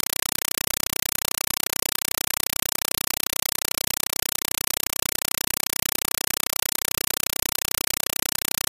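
Loud chattering static replaces the sound throughout, 5.33 ms noise bursts repeating 31.25 times a second: a compressed stream played as audio, likely AC-3 sent undecoded.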